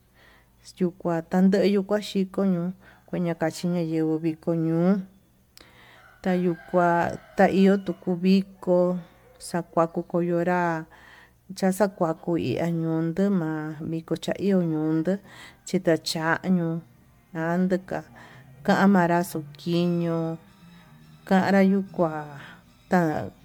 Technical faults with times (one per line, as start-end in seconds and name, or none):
0.00-23.44 generation loss